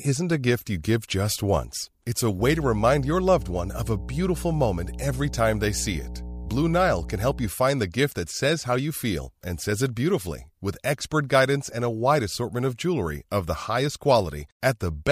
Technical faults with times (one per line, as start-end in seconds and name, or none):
2.37-7.51 mains hum